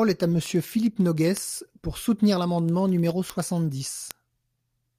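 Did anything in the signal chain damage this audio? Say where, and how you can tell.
Yes. The damage happens at the digital link into the converter. The receiving device is running on its own word clock instead of locking to the sender's, and the mismatch sounds like a couple of hundred parts per million. Each time the two clocks slip past each other, the receiver misreads the stream. This produces word clock ticks in the speech from 0.16 s to 4.92 s: about fifty sharp ticks, roughly one every tenth of a second, which points to a single sample being dropped or repeated at each slip.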